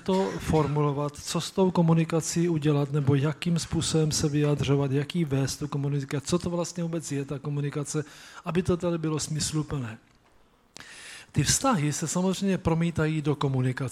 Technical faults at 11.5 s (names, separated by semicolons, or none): none